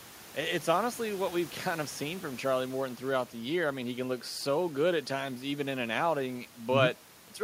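There are no technical faults in this speech; the only background is the room's own noise, sitting about 24 dB below the voice.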